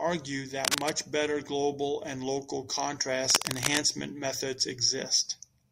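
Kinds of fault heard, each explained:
Cable scratch noise: Twice in this speech clip there's a burst of dense, ragged crackle riding over the talking, roughly as loud as the speech itself, first from 0.64 to 0.90 s, just before "better global and local", then again from 3.30 to 3.81 s. That rough, rustly texture most likely comes from a worn cable, plug or control being moved, so its contact resistance jumps around and spits noise into the signal.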